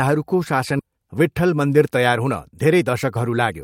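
At 0.79 to 0.81 s the speech skips ahead. About 0.7 s of audio was discarded while later packets were already queued, and the two sides are spliced with no silence. Unlike a dropout, there is no gap or fill, just an abrupt jump in the speech.

From 0.89 to 3.53 s a jitter buffer speed-up follows. The receiver, holding a backlog after the jump, trims short pitch-period slices again and again, running at about 109% and removing roughly 0.2 s. The speech sounds hurried, but, unlike resampling, the pitch stays unchanged.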